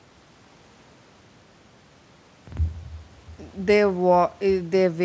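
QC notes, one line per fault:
No faults are heard in this speech clip. The sound has come through a working call path, with nothing above 8 kHz, which fits a wideband call codec such as G.722.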